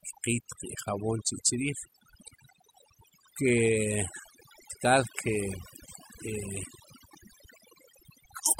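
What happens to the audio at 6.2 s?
At 6.2 s the speech is still under the overdone noise removal that runs through the whole clip. A noise reduction stage was driven far too hard, so every frequency band that sits close to its noise estimate gets pushed right down or switched off, and the softer parts of the voice are cut along with the noise. Here that leaves the gaps between sounds almost silent apart from sparkling, twinkling specks.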